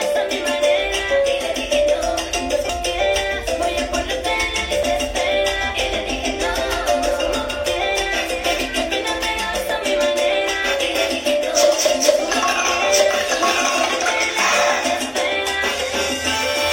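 At 2.69 s and again at 4.83 s the audio jumps, losing roughly a third and a fifth of a second; likely a dropped buffer (overrun), where unread samples were overwritten. The waveform shows an abrupt discontinuity, the spectrogram a thin vertical broadband line.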